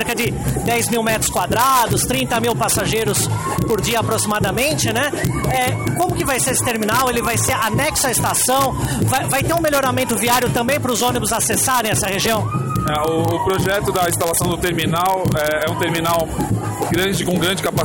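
Integer overflow affects the whole clip. The signal was pushed about 2 dB past the largest value the integer format can hold. Instead of being limited, each sample beyond that point wrapped around to the opposite sign and jumped across the full range. Only the highest peaks go over, roughly 0.2 percent of samples. What you hear is a sharp crack on each loud peak, more abrupt than ordinary clipping, rather than a continuous buzz.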